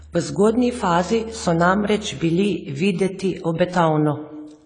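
From start to finish the speech carries plainly audible codec damage, likely from AAC compression at a low bitrate, which fits an AAC-LC stream at about 24 kbps. The encoder has discarded everything above 10 kHz and thinned the remaining bands, so the sound is dull and smeared, with a warbling, fizzy edge on sibilants and held vowels. A spectrogram shows a hard ceiling at 10 kHz and patchy, blocky gaps below it.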